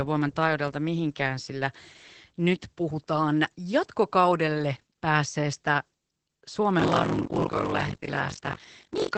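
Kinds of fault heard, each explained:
Opus voice compression: The whole clip carries the sound of a low-rate speech codec. It's running the linear-prediction SILK coder in wideband, so nothing gets through above about 8.5 kHz, and the excitation is coded coarsely. The voice comes out muffled, a bit hoarse and faintly robotic, and the damage is plainly audible. All of that points to Opus at a low bitrate, somewhere around 12 kbps, with 20 ms frames.
Buffer tearing: From 6.78 s to the end, a steady robotic buzz at about 46.9 Hz rides on the speech, which fits a 1024-sample buffer. The writer and the reader of the ring buffer have slipped against each other, so in each period something like 40% of the buffer still holds audio from a lap earlier, about 40 ms old. Hard joins on either side of that stale stretch make the rattle, and it's heard only while there's signal.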